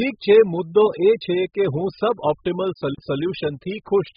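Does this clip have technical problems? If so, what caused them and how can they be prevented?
Yes. Throughout the speech there is heavy low-bitrate AAC compression damage, likely from AAC-LC encoding at a rate that fits roughly 8 kbps. Starved of bits, the encoder quantises its frequency lines coarsely and discards everything above about 5 kHz, leaving the sound dull and smeared. On a spectrogram this shows as a flat ceiling at 5 kHz with patchy, blocky energy below it. The waveform shows little. To prevent it, encode at a much higher bitrate or keep an uncompressed master.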